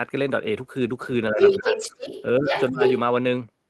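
From 1.3 to 1.96 s the speech dips by around 10 dB in patches, likely speech suppressed in double talk, where the echo canceller turns down the talker along with the echo. From 1.39 to 2.23 s a second voice comes through, a little louder than the talker. This is likely the other side's voice leaking through because echo cancellation did not remove it from the microphone. The pattern repeats, with shorter dips of around 15 dB at 2.39 to 2.53 s and 2.7 to 2.81 s, and the other voice returns from 2.48 to 2.96 s.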